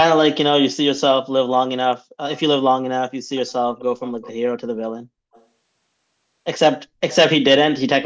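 Speech with echo leak. A faint copy of the speech returns 263 ms late at 3.35–3.53, 3.77–3.83, 4.06–4.31 and 5.33–5.44 s. It is likely loudspeaker sound that an echo canceller missed.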